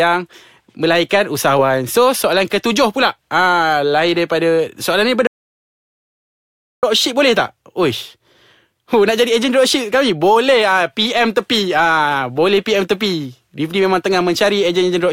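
At 5.27 s the speech cuts off abruptly and the track goes to dead digital silence until 6.83 s, when it resumes mid-flow on "boleh tak". This is an audio dropout to silence lasting about 1.56 s, with no room tone or hiss in the gap. The likely cause is a lost input, such as a disconnection or a momentary mute, while recording continued. The waveform shows a flat line, and the spectrogram shows a fully black band.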